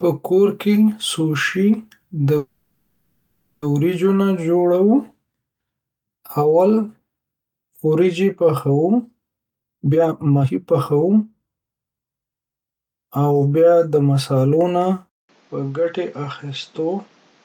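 At 2.37 s, right after "سوشی د", the call audio freezes until 3.64 s. The last sound is held and stretched into a fading buzz or hiss for 1.25 s instead of dropping to silence. When the audio resumes with "وریجو نه", it continues exactly where it stopped, so nothing is lost. The gap adds 1.25 s of delay, and the likely cause is packets held up in transit while the jitter buffer ran dry.

From 9.37 s to 12.57 s a jitter buffer speed-up is audible. The receiver trims short pitch-period slices over and over to work off excess buffered audio, taking out about one and a half seconds in total. Speech in this stretch plays at 139% of normal speed with unchanged pitch, so it sounds rushed and clipped in rhythm without turning chipmunk-like.

At 15.09 s the input switches to a poorer device, most likely a second microphone or a headset call profile. A 200 ms silence marks the switch. From there to the end the band is cut off at 7.6 kHz, so the sound turns duller and loses its top-end air. 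The level drops by about 5 dB, and a new noise floor sits roughly 30 dB under the speech.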